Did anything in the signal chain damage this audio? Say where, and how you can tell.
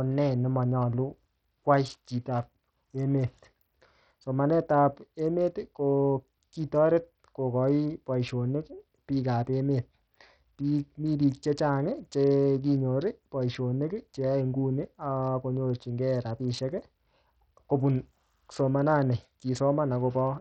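Yes. Bluetooth SBC compression damage runs through the whole speech clip at the codec stage: the treble thins and flickers, with gritty noise and aliased edges, which fits a low bit pool around 64 kbps, likely starving the upper sub-bands and coarsely quantising the rest.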